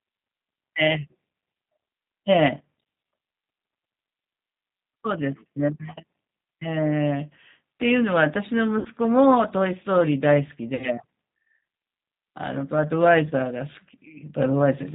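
Throughout, the speech sounds plainly rough and faintly synthetic, with a dull top end where nothing above 4 kHz survives. This is the G.729 codec at 8 kbit/s, which rebuilds each short frame from a vocal tract model, a pitch predictor and a few pulses.

From 8.79 to 8.87 s, and again from 10.75 to 10.87 s, the speech smears into a buzzy tone or coloured noise that fades, and stays weak briefly afterwards. This is VoIP packet loss concealed by the speech codec. Each gap, 60 ms long and consistent with three lost packets, is filled by extrapolating from the last pitch and filter.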